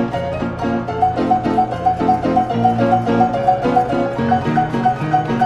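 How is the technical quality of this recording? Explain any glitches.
There's one real glitch, a case of compressed frames skipped at about 0.41 s. The decoder never played a few whole frames, roughly three of about 26 ms each, probably because they were missing or rejected as damaged, so the sound jumps ahead by around 70 ms. Since adjacent frames overlap, the join comes out as a short smeared blip rather than a sharp click, with a small chunk of sound simply gone.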